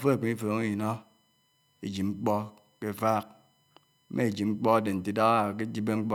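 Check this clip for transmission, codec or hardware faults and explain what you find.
One hardware fault is present, USB whine, and it runs through the whole of the speech clip.

Current drawn by the USB bus in 1 ms frames leaks into the audio through the power or ground path, adding a steady, fixed-pitch whine on a 1 kHz series, loudest at its 3 kHz multiple, sitting faintly, roughly 45 dB below the speech.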